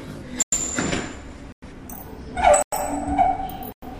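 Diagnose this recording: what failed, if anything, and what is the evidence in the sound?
The fault is a gap between chunks, arising at the chunking or playback stage. Silent holes of 100 ms open at 0.42, 1.52, 2.62 and 3.72 s, separated by exactly 1.0 s of sound. The audio was delivered in 1-second chunks, and silence was inserted at each join. Unlike a packet-loss dropout, nothing is missing: the sound picks up exactly where it stopped, and the holes recur on a rigid grid.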